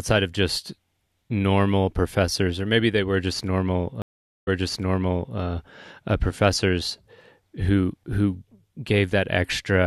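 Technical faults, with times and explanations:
4.02 to 5.38 s, stream reconnect: the speech drops out for 451 ms, then comes back about 0.9 s earlier than where it stopped, so the listener hears a stretch of the speech again. The connection broke, the player fell silent while it reconnected, and a fresh decoder started mid-stream. The server resent a burst of buffered audio, which caused the jump backwards, and the first frame after the restart fades in.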